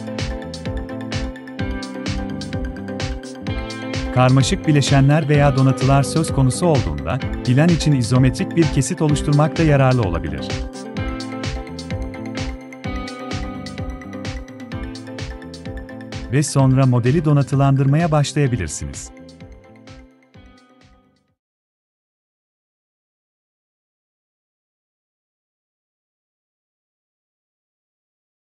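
Nothing technical stands out in this one; the sound just carries on steadily the whole way, with nothing that calls for a closer look.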